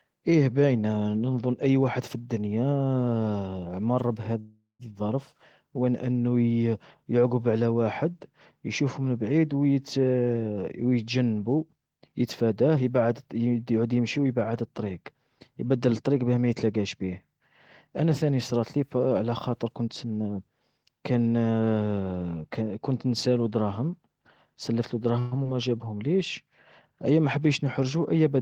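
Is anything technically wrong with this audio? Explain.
Yes. The speech has two call audio freezes, two jitter buffer speed-ups and one short concealed packet loss.

Call audio freezes occur at 4.39 to 4.82 s, just before "الظرف وين أنو", and at 25.19 to 25.35 s, just after "نسالوا دراهم سلفتلوا". The likely cause is delayed packets draining the jitter buffer. The receiver stretched the last sound into a fading buzz or hiss. The first freeze fills about 0.4 s and ends in 150 ms of silence. The second lasts about 0.12 s with no silence. The speech then resumes where it stopped, with nothing lost.

Jitter buffer speed-ups run from 11.68 to 13.86 s, ending before "يمشي ويبعد الطريق يبدل", and from 17.87 to 20.18 s. The buffer had built up extra delay. To drain it, the receiver cut many tiny pitch-period slices in a row. Each stretch loses roughly 0.2 s in total. The speech plays at 109% and then 108% speed, with unchanged pitch, so it sounds rushed.

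A short concealed packet loss falls at 25.44 to 25.47 s, just after the second freeze. About 40 ms of audio never reached the decoder. Only about 7 ms was patched by continuing the previous sound, and the rest was simply dropped. This also removed some of the delay the freeze had added. It is heard as a quick smear or wobble, and a brief consonant there may disappear.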